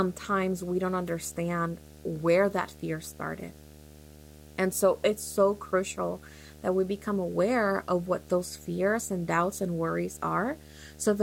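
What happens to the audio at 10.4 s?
At 10.4 s you're hearing video or display buzz, the same one running under the speech for the whole clip rather than anything new at that moment. A screen or video cable is coupling into the audio path, so you get a buzz at the picture's 75 Hz field rate with some gritty hash riding above it. It sits roughly 20 dB below the speech.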